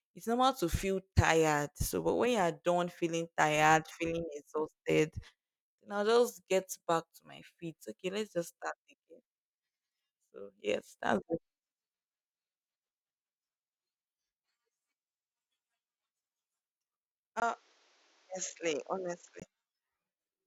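Speech, with one problem near the end: from 17.40 to 19.42 s, after a 20 ms dropout, the sound turns dull and boxy, nothing above 7.6 kHz, about 5 dB quieter, with faint new background noise underneath. Likely the input switched to a poorer device.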